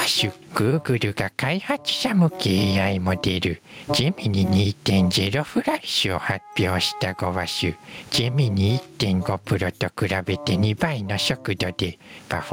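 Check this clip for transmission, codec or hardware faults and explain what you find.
One fault is present. Gain pumping runs throughout: the gain swings by about 20 dB, bringing loud and soft parts closer in level and squashing the sound, likely a fast limiter clamping excessive input gain.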